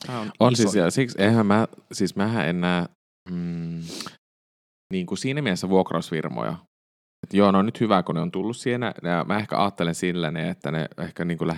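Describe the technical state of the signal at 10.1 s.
At 10.1 s the signal is intact, with no fault to be heard at that moment.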